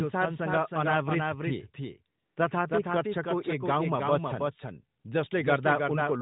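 From start to finish, a second full-band copy of the speech trails the original by roughly a third of a second at about 5 dB lower, with no decay or room colour. This doubled audio track is likely a second capture through a slower path mixed back in.

From 2.18 to 2.36 s, and again briefly at about 5.00 to 5.04 s, the background turns into a smooth, steady hiss that drops in and out abruptly. This is AMR comfort noise: the phone stopped sending speech frames for 180 ms and then 40 ms, and the receiver filled each gap with synthetic noise. The narrowband AMR coding shows in the audio's limited top end.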